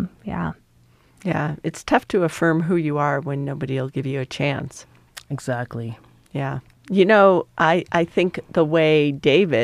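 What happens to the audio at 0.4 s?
Nothing goes wrong at 0.4 s; the speech is intact there, with no dropout, click, distortion or other fault at that moment.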